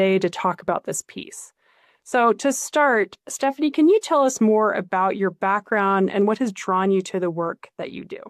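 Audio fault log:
6.21 s, dropped samples: there's a single sharp click here, a thin vertical line up the spectrum. Likely a couple of samples went missing, so the waveform jumps straight to a later value. That gap is a tiny fraction of a millisecond, far too short to lose any actual sound.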